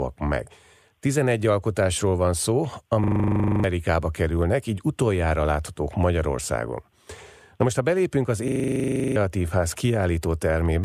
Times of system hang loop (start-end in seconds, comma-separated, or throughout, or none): 3.04-3.64, 8.48-9.16